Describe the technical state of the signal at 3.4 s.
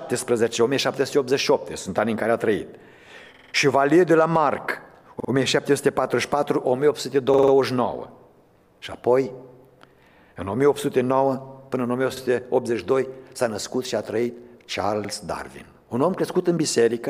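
At 3.4 s the signal has a repeated buffer, running from 3.34 to 3.53 s. Fresh audio failed to reach the output in time, so the device replayed its last chunk instead. That chunk is about 46 ms long, which fits a 2048-sample buffer. It plays four extra times, with a hard join at each restart. The result is a rapid, rhythmic stutter. Afterwards the sound resumes with essentially nothing skipped.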